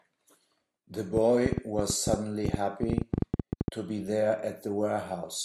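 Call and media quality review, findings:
Train of clicks, 1.17–3.69 s. Roughly thirty similar clicks at about 9.6 per second, unevenly spaced, well above the speech at around 15 dB, audible through pauses too. Likely interference from nearby equipment or a faulty connection or power supply injecting repeated pulses.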